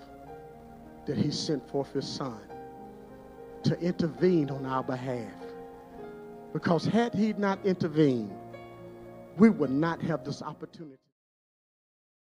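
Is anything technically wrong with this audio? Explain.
No, nothing technically wrong can be heard here.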